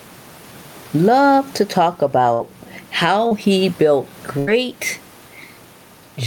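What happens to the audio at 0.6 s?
At 0.6 s you're hearing gain pumping, and it runs through the whole clip. The room noise sits about 36 dB under the speech, and the gain swings by around 10 dB, squashing loud and soft parts closer together, likely a fast limiter clamping down on gain that's set way too high.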